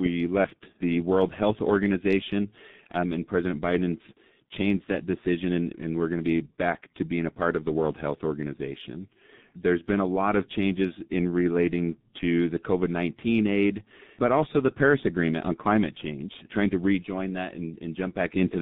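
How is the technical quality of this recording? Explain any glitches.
Quality is pretty rough: the whole clip runs through a G.723.1 codec, heavily damaged. The band stops at about 3.7 kHz and starts around 150 Hz, so speech is muffled. The slow, coarse voice model, consistent with roughly 6 kbit/s, leaves it hoarse with smeared consonants.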